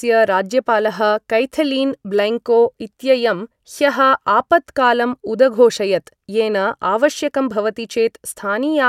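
No technical faults can be heard anywhere in this recording.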